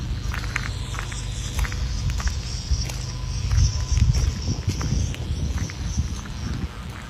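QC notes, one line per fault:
Throughout: mains buzz at 60 Hz, sitting roughly 20 dB below the programme and never letting up. Sharp switching spikes from a dimmer, rectifier or poorly shielded run arrive twice per mains cycle, so the interference carries a dense ladder of 60 Hz harmonics stretching up to several kHz. That upper content gives it a raspy, edgy quality, unlike plain hum, which stays a smooth, low tone with little above the first few harmonics.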